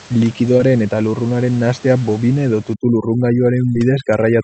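A speech clip carried over a call path whose top end stops near 8 kHz, consistent with a wideband Opus setting, with room noise sitting about 22 dB under the speech. Short concealed packet loss shows up twice, at 0.57 to 0.61 s and 3.73 to 3.77 s. About 20 ms of audio never arrived, and the receiver bridged the gap by extending the preceding sound before blending back. Unlike a plain dropout or click, nothing falls silent: you hear a brief smear or wobble. From 2.74 s to the end, overdone noise removal pulls the room background down and breaks it up into twinkling specks. Coding noise from the 48 kbps codec stays spread evenly, whereas these artefacts come and go as individual bands switch off around the noise floor.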